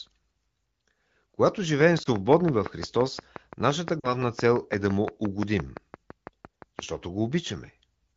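Speech coded with AMR wideband (HD Voice) at a rate that fits 15.85 kbit/s, with light codec coloration, carries two kinds of fault. A train of clicks runs from 1.81 to 6.80 s: regularly spaced pops at about 5.8 per second, roughly thirty in all, peaking around 15 dB above the speech and audible through the pauses as well. The near-identical shape and steady pace point to a repeating external pulse, likely interference from nearby equipment or a faulty connection or power supply. Lost AMR speech frames also occur. At 2.03 to 2.08 s there is a short dip and warble consistent with a single missing 20 ms frame, where the decoder bridged the gap by reusing the previous pitch and vocal tract settings at reduced gain. At 4.00 to 4.22 s a longer concealment, fitting two lost frames and 40 ms of missing audio, drops the sound to near silence within two frames before the signal returns weak and rough for a moment.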